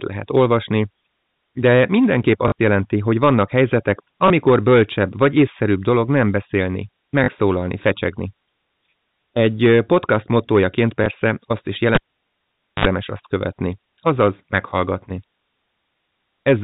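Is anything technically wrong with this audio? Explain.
Yes, two kinds of fault are audible in this speech.

Packet loss with last packet repeated occurs four times: 2.48–2.52 s (40 ms), 4.28–4.30 s (20 ms, just before "bölcsebb vagy észszerűbb dolog"), 7.24–7.28 s (40 ms), and 11.04–11.06 s (20 ms, between "podcast mottójaként" and "azt is"). The gaps fit one or two 20 ms packets. The receiver filled each gap by replaying the previous packet. The 40 ms runs buzz briefly at a 50 Hz rate, giving a short robotic stutter.

A cable pulled and plugged in runs from 11.95 to 12.85 s, after "azt is" and before "azt követni azaz meghallgatni". A pop marks the disconnection, followed by about 0.86 s of near silence. Reinsertion brings roughly 57 ms of 50 Hz mains buzz while only the plug tip makes contact, then a second pop as the signal returns. Throughout, the audio carries the 4 kHz band limit of G.711 telephone coding.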